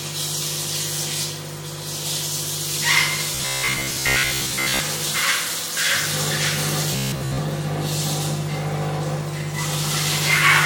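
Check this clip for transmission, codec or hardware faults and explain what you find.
Robotic sound from repeated short buffers occurs twice, from 3.35 to 4.80 s and from 6.93 to 7.38 s. The sound turns into a rigid, metallic buzz at 66.8 Hz. Most of the audio is likely being replaced by repeats of a roughly 15 ms buffer.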